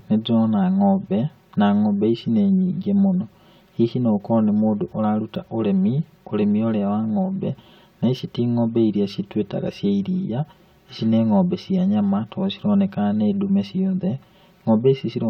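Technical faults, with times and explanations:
Throughout, channel delay (comb filtering): one channel lags the other by around 5 ms, and folding them to mono cancels shared content at evenly spaced frequencies, starting near 100 Hz. Those fixed notches leave the speech hollow and phasey from start to finish.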